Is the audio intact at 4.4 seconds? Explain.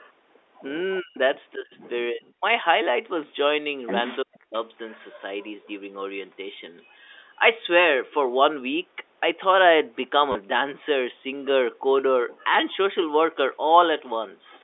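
No. From 4.23 to 4.55 s the speech dips sharply, nearly vanishing, a sign of speech suppressed in double talk, likely an echo canceller muting both talkers at once. From 4.35 to 4.39 s a faint delayed copy of the voice, 366 ms late, slips through, likely an echo leak from a loudspeaker.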